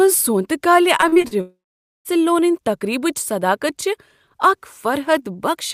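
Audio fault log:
0.97 to 1.33 s, repeated packet loss (robotic sound): six short holes, the longest 38 ms, leave about 140 ms of this speech missing, patched by repeating the preceding sound. Unlike a single long dropout, the gaps come in quick succession, so the result is choppy rather than silent.
1.41 to 2.07 s, long network dropout: about 640 ms never arrives, likely a network outage. The last sound is stretched into a fading buzz, then roughly half a second of silence follows before speech resumes at "لونن تقریبچ صداقت". One sustained gap, not repeated stutters.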